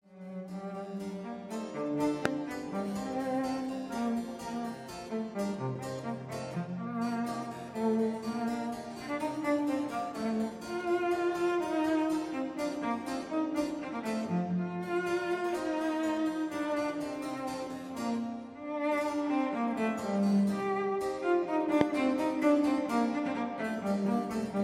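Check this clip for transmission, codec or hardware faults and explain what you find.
Two loud pops stand out, from 2.25 to 2.28 s and from 21.81 to 21.83 s, peaking roughly 25 dB and 20 dB above the sound. Each is likely a brief voltage spike from a switch, plug or static, heard as a sharp thump over the continuing audio. On a waveform each shows as a tall narrow spike, and on a spectrogram as a thin vertical stripe across all frequencies.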